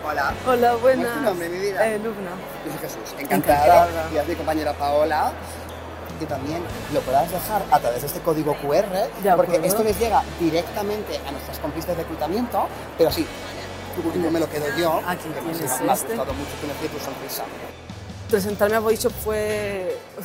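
No technical faults can be heard anywhere in this recording.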